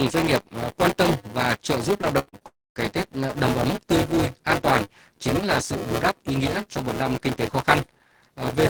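Buffer tearing runs through the whole speech clip as a constant 200 Hz robotic buzz, present only while there is signal. The writer and reader of the ring buffer have slipped, so roughly a fifth of each 5 ms period replays audio from about 15 ms earlier, with hard joins.

From 2.01 to 2.43 s, repeated packet loss makes the sound choppy. Four holes, the longest 80 ms, are patched by continuing the previous sound, so about a third of this stretch is concealed material rather than real audio.

At 2.47 s the audio turns into a brief, fading continuation of the last sound, followed by about 0.24 s of silence before the audio returns at 2.78 s without the roughly 0.3 s that was lost. A long network dropout is the likely cause.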